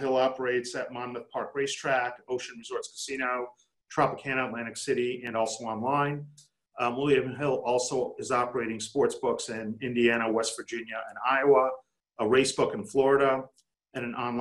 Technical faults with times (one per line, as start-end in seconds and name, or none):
none